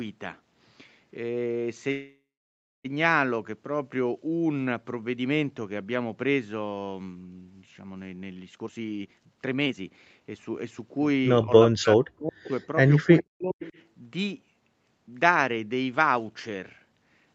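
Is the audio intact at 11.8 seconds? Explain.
No. At 11.8 seconds the speech sits inside a dip from about 11.71 to 12.52 s, roughly 0.7 s of it affected, where the level falls by as much as about 40 dB. This is speech suppressed in double talk. Sound from the far end was likely playing on the loudspeaker at the same time. The echo canceller could not tell the local talker from the loudspeaker echo, so it turned both down.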